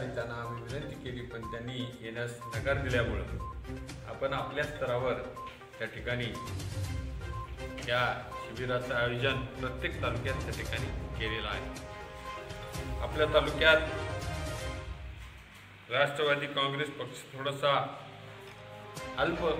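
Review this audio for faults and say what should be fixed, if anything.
No faults turned up in this audio, so nothing needs to be fixed.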